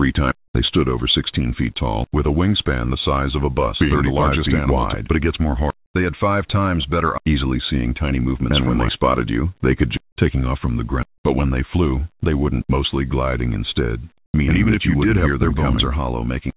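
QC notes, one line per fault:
14.26–14.34 s, comfort noise in place of the background: transmission likely paused, so 80 ms of background becomes smoother synthetic noise, about 12 dB quieter.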